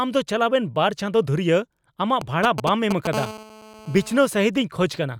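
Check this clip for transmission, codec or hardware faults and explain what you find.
Two hardware faults are present, both from interference by a nearby 2G mobile phone.

GSM signalling bursts appear from 2.21 to 3.07 s. The phone is sending short groups of radio bursts, as it does while signalling before a call or message. The audio circuit rectifies these pulses into sound. The result is a galloping dit-dit-dit of brief 217 Hz buzzes. The bursts come through at roughly the same loudness as the speech.

A GSM phone buzz follows from 3.13 to 4.26 s. The phone is now transmitting steadily, as during a call, pulsing 217 times per second. Rectification turns each pulse train into a hard, raspy buzz at 217 Hz with a dense stack of harmonics. The buzz is nearly steady and has no relation to the speech. It sits about 13 dB below the speech level.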